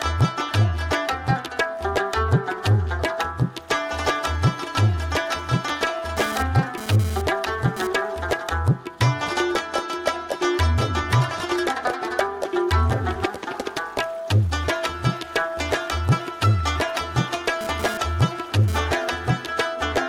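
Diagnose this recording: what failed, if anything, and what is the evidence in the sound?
GSM phone buzz intrudes twice, from 6.17 to 7.87 s and from 17.61 to 18.78 s. Each time a hard, raspy buzz at about 217 Hz appears, with a dense stack of harmonics. It sits about 10 dB below the signal and has no relation to it. The fault is in the analogue wiring. A nearby 2G phone transmitted in pulses, and the audio circuit rectified them. The buzz comes and goes, which points to a data transfer rather than a call.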